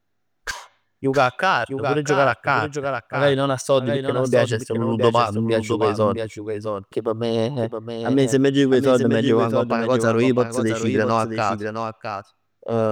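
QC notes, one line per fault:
Throughout, doubled audio track: every stretch of speech returns as a full-band copy roughly 0.7 s later and about 5 dB quieter, with no decay or room colour. The cause is likely a second, slower capture path mixed in. Waveform and spectrogram show each burst repeated at that fixed offset.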